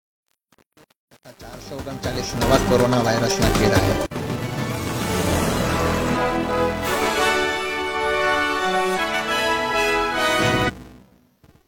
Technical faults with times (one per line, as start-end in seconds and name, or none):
0.00-11.67 filter restarted on every block
0.00-2.54 truncation distortion on a fade
3.65-3.70 damaged data in a compressed stream
6.12-6.17 damaged data in a compressed stream
8.94-9.00 damaged data in a compressed stream
10.65-10.70 damaged data in a compressed stream